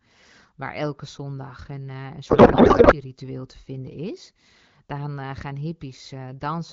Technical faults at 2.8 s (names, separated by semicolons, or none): codec payload misread